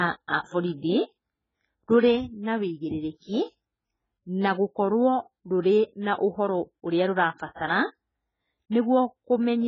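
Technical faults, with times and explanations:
Throughout, AAC compression: the speech sounds dull, with nothing above 7.6 kHz, and heavily smeared with a warbling, fizzy texture. That fits AAC-LC, likely starved at around 12 kbps. Unlike a plain low-pass filter, the damage also reaches below the cut-off.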